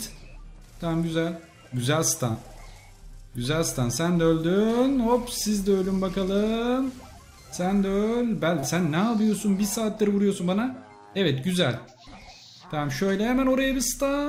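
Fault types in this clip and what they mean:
Short concealed packet loss: Twice, about 40 ms of the stream failed to reach the decoder in time, near 2.31 s and again near 8.59 s. Each time the receiver covered the gap by extending the preceding sound for roughly 31 ms and then blending back into the real audio. What you hear is a brief smear or wobble where the true signal should be, with that sliver of the original sound lost.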